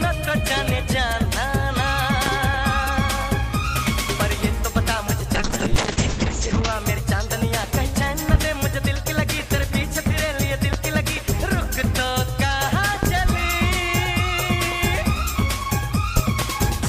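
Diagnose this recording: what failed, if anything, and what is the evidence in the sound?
Loud pops at 2.26–2.30, 8.34–8.38 and 10.73–10.77 s, with double pops at 13.03–13.29 and 16.17–16.46 s, sit roughly 15 dB above the sound, which continues underneath. The likely cause is a voltage step in the analogue wiring, such as a plug, switch or static discharge, shaped into a thump by the circuits downstream.

A call bitrate drop from 5.38 to 6.78 s has its origin in the network and call stage. The bandwidth estimate collapsed, and the encoder fell from 128 to 7 kbps for about 1.3 s. The coarser coding sounds rough and watery, and the audio bandwidth narrows from 20 kHz to 8 kHz, which muffles the top end until the bitrate recovers.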